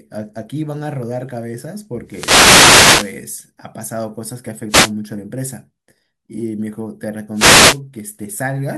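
Wireless microphone noise hits occur at 2.05 to 3.20 s, 4.68 to 4.92 s and 7.33 to 7.80 s in this speech. Each is a swish of static over the speech, lasting about a second in the first case and a quarter to half a second in the others. The analogue FM radio link from the microphone dips as reflected signals cancel the direct one, and the receiver's own hiss surges in until the signal recovers.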